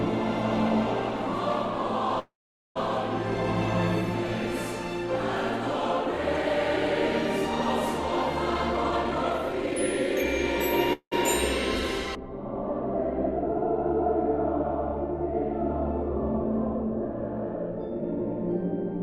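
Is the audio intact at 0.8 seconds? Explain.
Yes, the audio is intact at 0.8 seconds, with no fault present at that moment.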